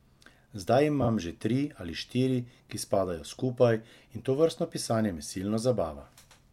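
At 1.01 to 1.07 s the speech has a case of frames out of order. Two adjacent blocks of about 26.1 ms each swapped places, so the later block plays before the earlier one and the stretch comes out with its halves exchanged, with nothing missing. It sounds like a brief garbled flutter. A spectrogram shows formant tracks jumping backwards and forwards at those boundaries, and the waveform shows abrupt discontinuities there.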